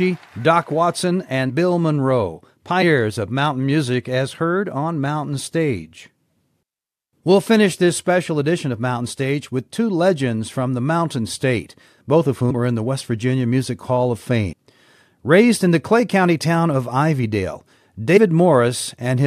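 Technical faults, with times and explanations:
1.49, 2.81, 12.49, 14.51 and 18.16 s, compressed frames skipped: at each point the speech lurches forward because whole chunks of the coded stream never got played, either missing or rejected by the decoder as damaged. The jumps run from roughly 50 ms to about 200 ms, which fits losing a handful of frames of about 23 ms each.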